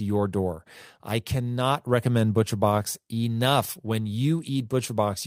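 At 3.85 to 3.87 s, a lost packet was rebuilt from error correction. A 20 ms stretch plays from a low-bitrate copy, so speech continues but sounds briefly rougher and noisier.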